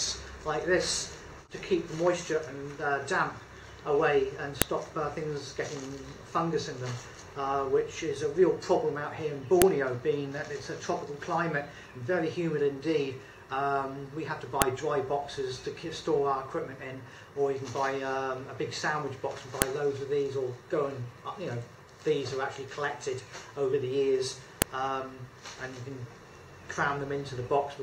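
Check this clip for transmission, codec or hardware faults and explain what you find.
A file header played as audio shows up five times, at 4.62, 9.62, 14.62, 19.62 and 24.62 s. Each is a brief, sharp snap. The snaps recur every 5 s, regardless of what the sound is doing. This points to the audio being joined from 5 s WAV pieces whose headers were never stripped. Those few dozen header bytes get read as sample values. They form a tiny burst of unrelated, high-level data, heard as a loud click.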